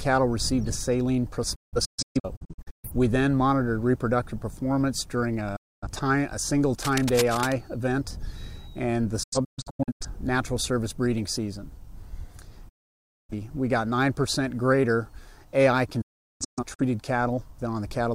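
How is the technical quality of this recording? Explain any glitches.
The recording is marred by repeated digital broadcast dropouts and one burst of cable scratch noise.

Digital broadcast dropouts occur at 1.55–2.90 s, 5.56–5.87 s, 9.23–10.05 s, 12.69–13.33 s and 16.01–16.82 s. The receiver lost valid frames and muted, with 8 ms fades. The first, third and fifth break into several short holes, the longest 0.38 s. Whatever was transmitted during each hole is gone.

Cable scratch noise runs from 6.76 to 7.53 s. A worn cable, connector or control was likely disturbed, rapidly varying its contact resistance. The result is dense, uneven scratching laid over the sound at roughly 10 dB below it.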